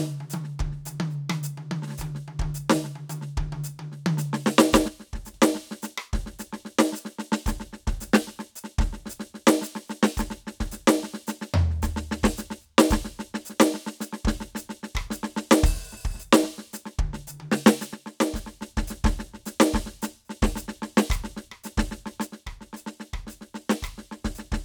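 One channel of the stereo music drops out three times, likely a lost connection or signal on that side, and in the mono sum the music falls abruptly by about 6 dB while anything carried only on that side vanishes. The first dropout runs from 4.88 to 5.34 s and the second from 17.94 to 18.62 s. The third starts at 22.27 s and lasts to the end, so the music finishes quieter.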